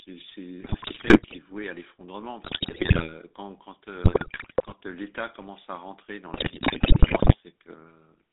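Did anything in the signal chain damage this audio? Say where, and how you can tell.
Yes. The codec stage damaged it throughout. The sound has the buzzy, gravelly roughness of the GSM full-rate codec, and the band is held to 300 Hz to 3.7 kHz. This fits the 13 kbps full-rate coder, which rebuilds speech from a vocal-tract filter and sparse pulse excitation.

The radio link added GSM bit errors in four bursts: 0.62 to 1.36 s, 2.44 to 3.14 s, 4.04 to 4.73 s, and 6.34 to 7.36 s. In each burst the speech breaks into squawks, pops and gargling. Corrupted filter, pitch and gain values warp the spectrum or spike the level frame by frame.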